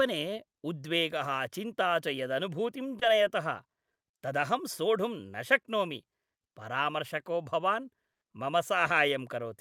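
At 2.99 to 3.03 s, a short concealed packet loss occurs. About 20 ms of the speech arrived too late for the decoder, and the receiver invented a stand-in by extending the sound that came just before it, then crossfaded back into the real signal. With 20 ms gone, the result is a brief smear or wobble in the voice. It passes quickly.

At 8.13 to 8.23 s, right after "शक्नोमि परामर्शको भवान्", there is a burst of packet loss. Consecutive packets never arrived in time, and the receiver stretched the last received sound across 80 ms while steadily turning it down. What you hear is a held, fading tail, buzzy where the sound was voiced, before the speech picks up again further on. The 80 ms in between is simply missing from the audio.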